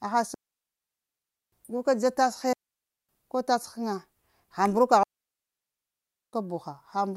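Digital wireless dropouts at 0.34–1.52 s, 2.53–3.09 s and 5.03–6.33 s: the receiver loses too much data and mutes, leaving clean near-silent holes, visibly flat gaps in waveform and spectrogram, without noise bursts.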